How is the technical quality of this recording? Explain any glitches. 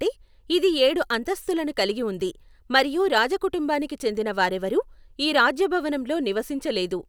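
No glitches or technical faults can be heard anywhere in this speech recording. There is nothing here that needs explaining.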